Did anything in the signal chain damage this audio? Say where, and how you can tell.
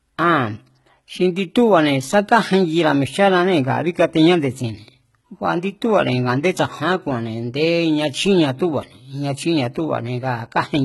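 Yes, at the codec stage, across the whole clip. The s sounds come out gritty and lispy, with a bright but synthetic-sounding treble over heavily damaged lower bands, which is likely HE-AAC compression at a very low bitrate, around 16 kbps. A spectrogram would show nothing above 11.8 kHz, with the upper band looking like a blocky, pasted copy of the region below. That is spectral band replication rebuilding the treble, so its harmonics don't line up with the real ones.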